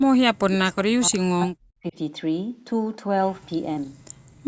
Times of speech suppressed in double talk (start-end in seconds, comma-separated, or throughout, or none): 0.42-1.96